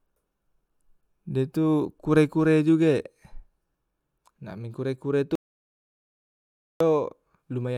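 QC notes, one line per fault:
5.35–6.80 s: audio dropout to silence. The input feed was likely interrupted by a disconnect, link failure or stray mute while recording carried on storing silence. The speech cuts off mid-flow into 1.45 s of silence with no room tone, then returns abruptly.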